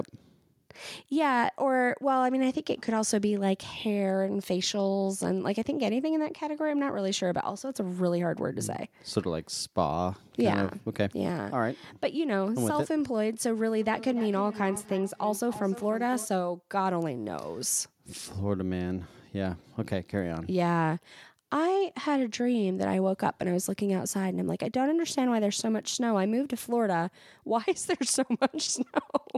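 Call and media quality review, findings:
Feedback echo between two devices, 13.81 to 16.33 s. Speech comes back roughly every 300 ms, about 14 dB under the talker. A second device in the room replays this mic's audio, and its canceller only removes its own playback.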